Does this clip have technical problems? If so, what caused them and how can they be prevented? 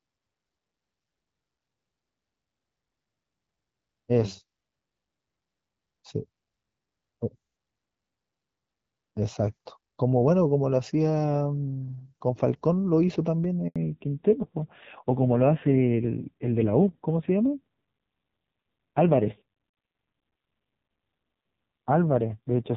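Yes. At 13.68 s the speech cuts to silence for 80 ms, ending at 13.76 s. The voice falls away quickly and nothing is heard until the signal resumes. This is a handover gap: the call moved from one network to another, and no speech frames arrived while the link switched over. Whatever was said in that 80 ms is gone. Keeping the device on a single network with stable coverage during calls prevents it.

From 13.76 s to the end, the voice sounds muffled and rougher. Before that point it is clear HD Voice with only light coding damage, which fits AMR-WB at 12.65 kbit/s. Afterwards nothing is heard above 4 kHz, and the rasp points to a low-rate narrowband codec around 5.9 kbit/s. This is a fallback to narrowband: the new link no longer carried wideband audio. Making sure both networks support AMR-WB prevents it.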